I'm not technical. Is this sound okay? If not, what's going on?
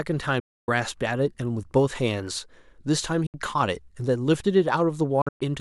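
No. What you're hearing is likely a Bluetooth dropout: the wireless link to the headphones failed to deliver bits of audio in time, so those bits were thrown away. The speech cuts suddenly to silence from 0.40 to 0.68 s, again briefly from 3.26 to 3.34 s, and in a few broken gaps between 5.21 and 5.41 s, the longest about a tenth of a second. Each time, the speech resumes further along, as if it had kept playing.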